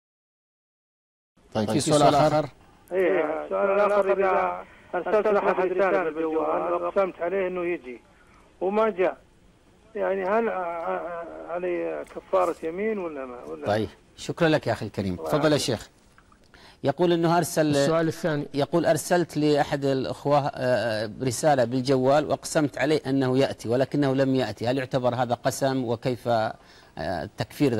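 From the very start until 7.0 s, every sound is followed by a second, equally loud copy about 150 ms behind, giving a hard, slapback-like doubling with no reverberant tail or added room colour. At 7.0 s the trailing copy stops abruptly. This is a doubled audio track, likely caused by the same signal reaching the mix twice, once directly and once through a slower route or a misaligned edit.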